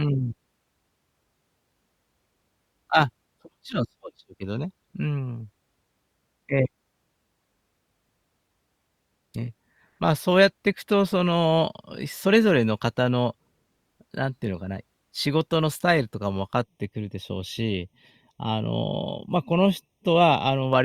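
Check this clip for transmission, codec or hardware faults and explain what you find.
One fault: channel delay (comb filtering) from 16.63 to 20.73 s. A roughly 0.3 ms inter-channel offset, summed to mono, notches near 1.5 kHz, sounding hollow and phasey.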